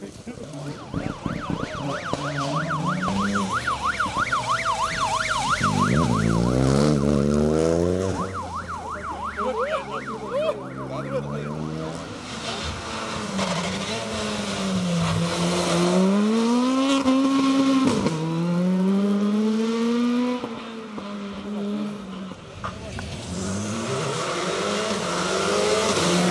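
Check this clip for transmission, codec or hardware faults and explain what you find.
One fault runs through the whole clip: a resampler restarted on every block. The 48 kHz to 24 kHz conversion was applied to each 10 ms block in isolation, leaving a small error at every block edge. At 100 per second these ticks fuse into a buzz heard only while signal is present.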